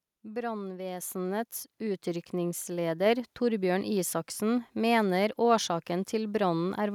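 At 1.02 s the microphone volume steps up, abruptly rather than as a gradual fade. The call software judged the input too quiet and raised the device's capture level in a single move of about 6 dB. Because the change happens at the microphone before any other processing, the speech and the background noise beneath it jump louder together at that instant, and the higher level then holds.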